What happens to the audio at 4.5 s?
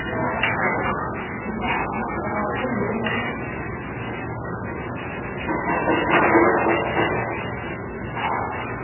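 At 4.5 s the sound is dull and watery, with nothing above about 2.9 kHz and a swirling, chirpy texture that runs through the whole clip. That points to heavy MP3 compression, likely at a very low bitrate around 8 kbps: the encoder chops the treble and drops weak frequency lines frame by frame. Those flickering artefacts set it apart from a plain low-pass filter, which would only sound muffled.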